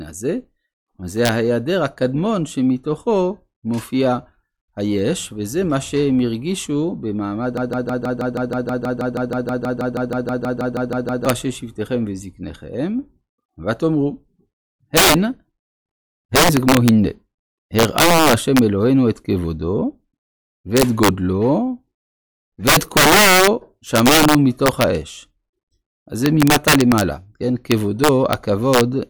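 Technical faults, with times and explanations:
Throughout: integer overflow. The signal is pushed about 10 dB past full scale, and roughly one percent of samples wrap to the opposite sign instead of being limited, giving harsh cracks on loud speech peaks. On the waveform, peaks jump abruptly between extremes; the spectrogram shows broadband vertical streaks.
7.57 to 11.26 s: broken-record loop. A 160 ms fragment repeats exactly, back to back, 23 times, most likely because the player or stream stalled and kept resending its last fragment. The speech for that span is lost. The waveform shows identical repeating blocks, and the spectrogram shows a regularly tiled pattern.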